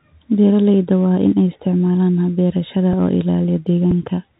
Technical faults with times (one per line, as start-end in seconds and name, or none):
0.00-4.40 Bluetooth CVSD headset codec
2.93 Bluetooth headset packet repeated
3.91 Bluetooth headset packet repeated